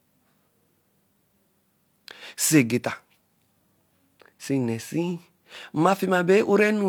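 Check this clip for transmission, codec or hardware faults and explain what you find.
Nothing stood out on listening to this speech recording.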